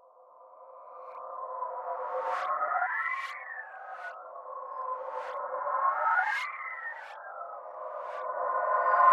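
No technical faults can be heard anywhere in this sound.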